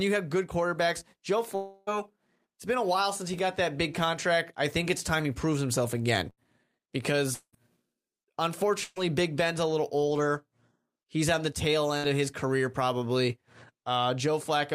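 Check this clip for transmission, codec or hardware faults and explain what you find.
Five transmission faults interrupt this speech: two long network dropouts and three bursts of packet loss.

From 1.55 to 1.96 s, just before "it's been a while", the sound stretches into a fading fill. This is likely a long network dropout: about 0.32 s never arrived and was filled in.

From 6.30 to 6.39 s, right after "he proves himself again", a short fill replaces speech. This is a burst of packet loss: roughly 80 ms went missing and the receiver extended the last sound.

From 7.34 to 7.55 s, a fading fill drops into brief silence of about 70 ms. This is likely a long network dropout, with 0.2 s lost.

From 8.84 to 8.98 s, a fading fill covers a gap. This is a burst of packet loss of about 120 ms, concealed by continuing the preceding sound.

From 11.98 to 12.08 s, between "on the tail" and "of his career probably", a brief fading fill appears. 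This is a burst of packet loss, with about 60 ms dropped.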